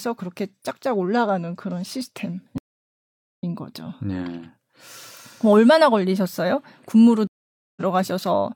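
Stream reconnects at 2.58 s and 7.27 s: silences of 0.81 s and 0.49 s, then a freshly started decoder fades in, skipping ahead about 0.7 s, then barely at all, unlike a dropout.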